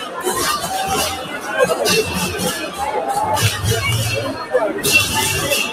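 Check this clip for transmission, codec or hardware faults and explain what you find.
A speech-oriented noise suppressor is processing this audio throughout, and in four places it pulls the sound down further.

The noise suppressor applied to music or sounds runs for the whole clip, with its gain swinging by around 10 dB. Built to separate a voice from background noise, it treats steady, sustained content and decaying tails as noise and attenuates them, while sharp onsets pass. The sound pumps and thins as the level rises and falls. On a waveform the envelope breathes unevenly, and on a spectrogram sustained bands fade and return instead of holding steady.

The sound cut by the noise suppressor occurs at 0.00–0.23 s, 1.17–1.49 s, 2.63–2.80 s and 4.33–4.53 s. The deepest drop is about 7 dB in three of these spans and about 6 dB at 2.63 s. In each span the suppressor judged the audio to be noise and clamped it harder than elsewhere, so the sound dips for a fraction of a second. 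The waveform shows short sags in amplitude at these points, and the spectrogram shows matching darker gaps.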